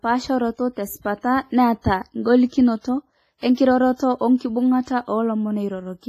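Across the whole speech clip there is a washy, ringing quality, with hiss that swells and fades with the voice and nothing above 15.3 kHz. This is likely WMA compression, heavily applied, with a transform codec discarding weak detail at a rate consistent with about 24 kbps.

Pre-echo appears at 2.81 to 2.85 s, 3.38 to 3.43 s and 3.55 to 3.57 s. A brief hiss of 37, 48 and 26 ms arrives just ahead of each sharp onset, softening it, because the codec spreads each block's quantisation noise into the quiet before the attack.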